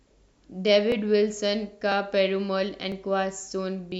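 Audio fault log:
0.92–3.92 s, clock drift buffer slips: a short click recurs every 1.0 s, about four times, through the speech. This is likely two devices on clocks that disagree by roughly a tenth of a percent, so a buffer creeps until a few dozen samples are dropped or repeated at once. On a waveform each slip is a small discontinuity in the signal; on a spectrogram, thin vertical broadband lines evenly spaced one second apart.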